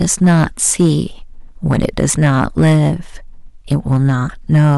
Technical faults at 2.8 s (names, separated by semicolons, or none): hard clipping